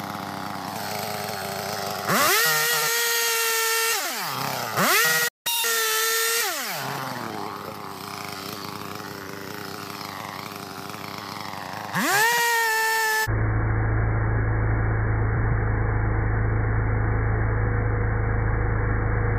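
At 2.76 to 2.88 s and again at 3.99 to 4.10 s, frames out of order cause a brief garbled flutter. Two adjacent blocks of about 52 ms each play with their positions swapped, which points to runs of two 26 ms frames. A spectrogram shows abrupt vertical discontinuities where spectral content jumps back and forth.

At 5.28 s the sound stops dead for about 172 ms in a playback stall, most likely the player's buffer running dry. The waveform shows a flat silent gap, and the spectrogram shows a clean vertical band of silence cut across the ongoing energy.

From 5.47 to 5.64 s, catch-up at higher speed follows. The backlog is resampled at 2.0 times speed, so the audio briefly jumps up by around ten semitones with a chipmunk quality. On a spectrogram, the harmonics shift upward and their spacing widens, then fall back at 5.64 s.

Frames out of order recur at 10.73 to 10.79 s, a single pair of 26 ms blocks exchanged, heard as a quick flutter. 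They recur again at 15.36 to 15.52 s, where 78 ms blocks suggest three-frame runs were swapped. That one is a longer stutter, with visible seams in the waveform.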